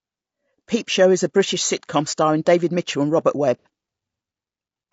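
Low-delay AAC compression runs throughout: the speech sounds rough and grainy, likely from AAC-ELD's short frames smearing pitch harmonics at a low bitrate, around 32 kbps.

AAC frame loss with concealment follows at 3.59 to 3.67 s: the decoder patches a couple of missing frames from earlier spectrum, leaving a brief smeared, noisy patch.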